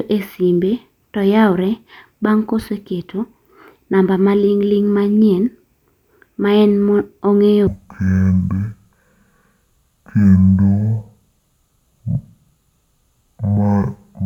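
From 7.67 s to the end, stereo read as mono: interleaved samples play as one channel, so speech drops to half speed, an octave lower, with harmonics squeezed downward on the spectrogram.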